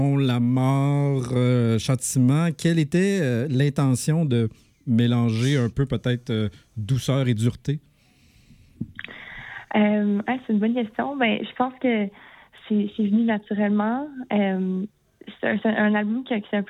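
No technical faults can be heard anywhere in this audio. There is no moment in it that stands out as a problem to point to.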